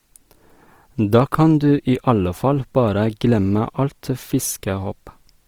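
Across the whole speech clip, Opus compression is likely: the music-mode coder keeps each band's energy but refills starved bands with folded or noise content, so tones sound grainy and rough. Content extends to 20.4 kHz, and the plainly audible damage fits roughly 24 kbps.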